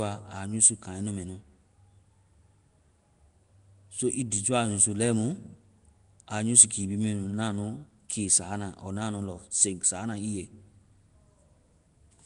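Throughout the speech, a rough, hissy, underwater smear points to likely Nellymoser compression, with starved bands filled with noise. The spectrogram shows speckled bands and nothing above 10.6 kHz.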